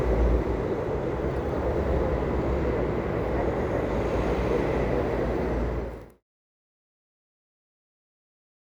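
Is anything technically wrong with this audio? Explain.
No, there is nothing technically wrong here.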